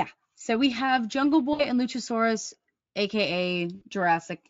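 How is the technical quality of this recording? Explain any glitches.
Two brief glitches interrupt the speech, both from VoIP packet loss concealed by the speech codec; the Speex coding itself adds little more than faint colouring.

At 1.53 to 1.65 s and again at 3.75 to 3.84 s, the speech smears into a short buzzy, fading tone. About 60 ms of audio went missing, and the decoder filled the gap by repeating its last pitch and spectral shape at falling level. The voice then takes a moment to recover.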